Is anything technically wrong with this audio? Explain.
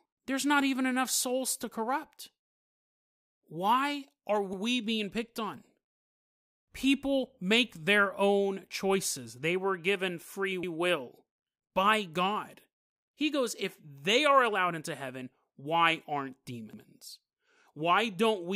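Yes. Overlapping chunks cause a stutter at 4.53 s (before "being picked on"), 10.63 s (after "were given free") and 16.73 s (after "into heaven why aren't"). Every 6 s, each chunk restarts 100 ms early, replaying that slice. The waveform shows a duplicated segment, and the spectrogram shows a repeated strip with a vertical seam at each join.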